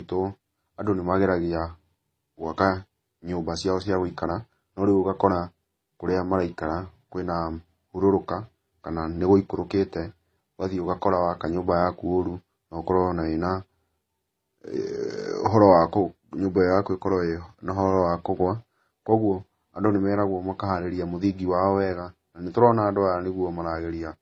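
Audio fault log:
Throughout: transcoding between lossy codecs. The speech carries several kinds of artefact at once, the different codecs' artefacts heard together, with nothing above 14.7 kHz. This likely comes from a low-bitrate MP3 re-encoded through AAC-LC and then HE-AAC, each stage adding its own damage.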